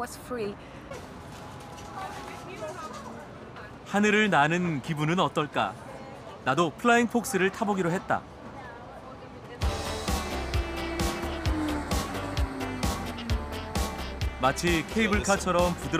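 No technical faults can be heard anywhere in this audio; the signal stays steady and intact throughout.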